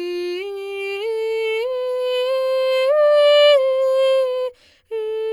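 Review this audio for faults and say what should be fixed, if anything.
No faults turn up in this music, so nothing needs to be fixed.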